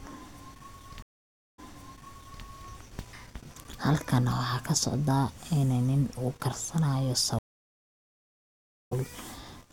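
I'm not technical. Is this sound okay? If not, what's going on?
No, there are two stream reconnect dropouts. At 1.02 s the speech stops for about half a second and the connection restarts, replaying 0.86 s you already heard. At 7.39 s, after "ini nin uu karsanayo", there's a 1.5 s gap, then it picks up a little later, skipping a bit.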